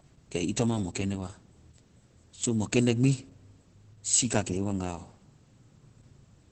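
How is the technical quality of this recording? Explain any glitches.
Technical quality is poor, with one fault running through the whole speech recording: Opus voice compression at a very low bitrate. The codec is working in its SILK linear-prediction mode, which models the voice as a filter driven by a coarsely coded excitation, and the damage points to roughly 10 kbps. Nothing survives above about 8.4 kHz, so the speech sounds muffled and dull, while the starved excitation makes it hoarse, grainy and faintly robotic from start to finish.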